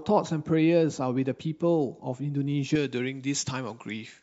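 Speech clip, and from about 2.76 s to the end the pre-emphasis is left on: the treble boost never gets its matching de-emphasis, so highs sit about 11 dB up at 10 kHz, which sounds thin, bright and hissy.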